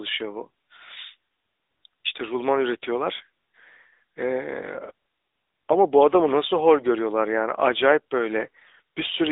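Throughout, the speech carries the sound of the AMR narrowband mobile codec. The band runs from 250 Hz to 3.7 kHz, with nothing above. The voice is plainly buzzy and synthetic, which fits the 10.2 kbps mode. Each frame rebuilds the voice from a vocal tract model and a few pulses.

From 5.28 to 5.30 s, one AMR speech frame is lost, 20 ms of audio. The decoder fills the gap by repeating the last good settings at lower gain. This causes a brief dip or warble before the voice resumes.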